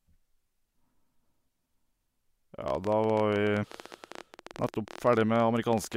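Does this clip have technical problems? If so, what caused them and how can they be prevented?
Yes. A train of clicks runs from 2.68 s to 5.95 s, about 14.5 per second at an irregular pace, roughly fifty in all, with peaks a few decibels above the speech. The clicks are similar in shape and tick through pauses as well as words, so they sit on top of the recording rather than coming from the talker. The likely cause is electrical interference from nearby equipment or a faulty connection or power supply. To prevent it, move or switch off noisy equipment, use shielded cables, and check the interface's connection and load.

Damaged data in a compressed stream appears from 3.62 to 3.65 s as a short blip over the clicks. Corrupted, lost or overwritten bytes in the encoded file make the decoder misread those frames, lose its place, and search for the next valid frame header, leaving a brief burst of wrong sound. 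To prevent it, store and transfer the file with checksums, use reliable transport, and keep metadata out of the audio frames.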